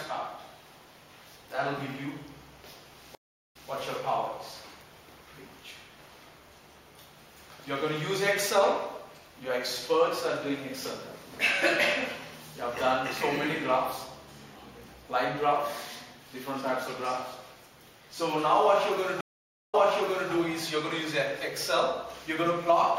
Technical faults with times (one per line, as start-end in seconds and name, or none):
3.15-3.69 stream reconnect
19.21-20.32 stream reconnect